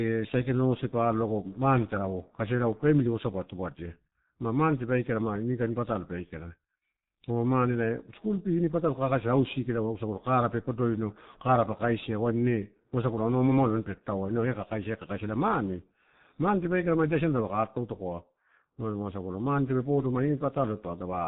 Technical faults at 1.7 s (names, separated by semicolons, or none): G.723.1 codec